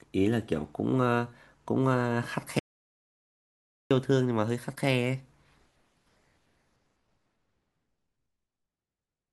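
A speech clip with one clear problem: an audio dropout to silence running from about 2.59 s to 3.91 s. The sound just cuts off mid-flow and comes back a bit over 1.3 s later, and the gap is silent, with no room tone or hiss at all. Whatever was said in that stretch is simply gone. The likely cause is the input dropping out, through a device disconnect, a link failure or an accidental mute, while the recorder kept writing silence.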